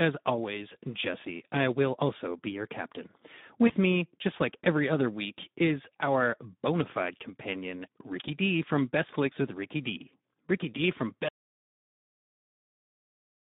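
Across the whole clip the speech sounds hoarse and grainy, confined to a band from about 150 Hz to 3.7 kHz. These are Speex codec artefacts: this CELP coder, at a setting that fits roughly 11 kbps, has too few bits to model the excitation cleanly.

At 3.67 to 3.72 s, between "be your captain" and "me just like every", the speech briefly smears into a buzzy or noisy, fading stretch. This is VoIP packet loss concealed by the speech codec. The decoder extrapolated its last pitch and filter across a gap that fits a single lost 20 ms packet.

From 11.29 s to the end, the sound cuts off into total silence with no room tone. This is an audio dropout to silence, likely caused by the input being lost while the recording continued writing silence.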